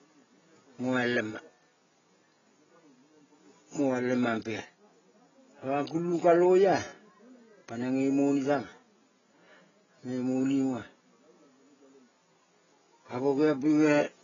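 From start to end the speech is dull and smeared, with a watery, warbling texture on vowels and fizzy, swirling sibilants, the signature of heavy AAC compression, likely AAC-LC at a very low bitrate near 16 kbps. The encoder discards detail it judges inaudible, and nothing survives above 7.1 kHz. A spectrogram shows a flat ceiling at that line, with blotchy holes and patches of substitute noise beneath it. The faint room noise, about 51 dB below the speech, shows as a thin floor.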